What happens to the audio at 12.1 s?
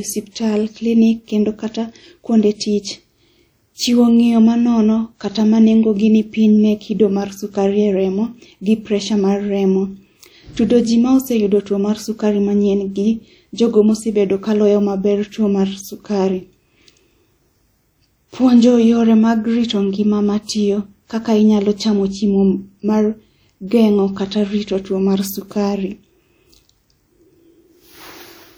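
At 12.1 s the speech carries the same ringing, washy smear heard throughout, likely WMA compression at a rate that fits about 48 kbps. Long transform blocks spread quantisation noise over tens of milliseconds and zero weak components, so a spectrogram shows smeared onsets and patchy gaps.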